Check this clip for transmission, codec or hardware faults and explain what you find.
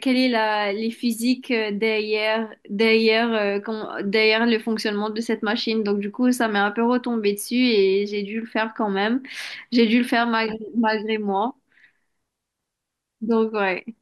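Nothing in the recording points to a transmission, codec or hardware fault.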